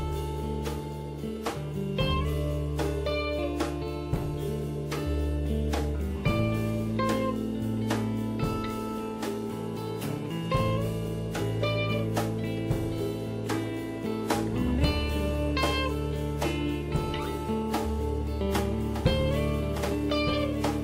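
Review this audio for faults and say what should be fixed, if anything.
A doubled audio track starts abruptly at 18.73 s and runs to the end. It is a full-band copy about a second behind and roughly 10 dB quieter, likely from a second, slower capture path. Unlike an echo, it has no decay or room colour. Prevent it by sending the source through a single capture path and removing overlapping copies in the edit.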